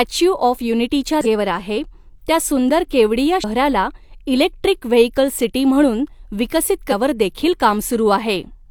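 Short glitches break through the speech three times: at 1.21 s for about 56 ms, after "यूनिटी ज्या" and before "आहे त्या सुंदर केवड़िया"; at 3.39 s for about 58 ms, after "आहे त्या सुंदर केवड़िया"; and at 6.88 s for about 54 ms, after "वेहिकल सिटी म्हणून विकसित". Each is damaged data in a compressed stream. Corrupted bytes make the decoder misread frames and lose sync, producing the blip before it finds the next valid frame header.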